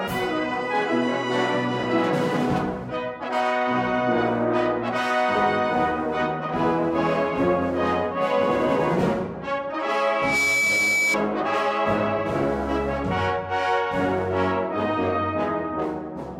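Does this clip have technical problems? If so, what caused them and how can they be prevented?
Yes. From 10.09 to 11.18 s a piercing 2.3 kHz tone swells up over about a third of a second and peaks a few dB above the sound. This is loudspeaker feedback squeal: the microphone re-amplifies the loudspeaker at that pitch. Lowering gain or moving the microphone away from the speaker prevents it.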